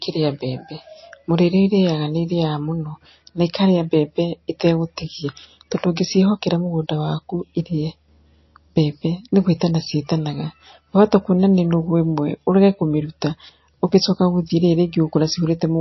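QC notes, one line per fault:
Throughout: MP3 compression, likely, given that nothing comes through above 5.8 kHz and the speech has a plainly audible watery, swirly smear. That points to a starved bitrate near 27 kbps, with the encoder lopping the treble and dropping weak detail frame by frame.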